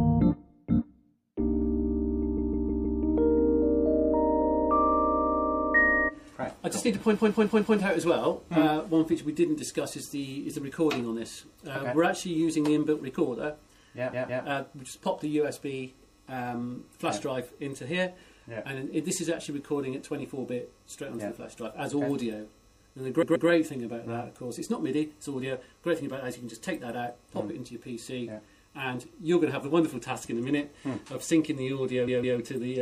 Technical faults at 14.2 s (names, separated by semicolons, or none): MP3 compression; repeated frames